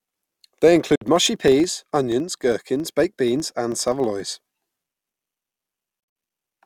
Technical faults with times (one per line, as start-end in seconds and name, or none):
0.95-1.02 Bluetooth dropout
6.00-6.16 Bluetooth dropout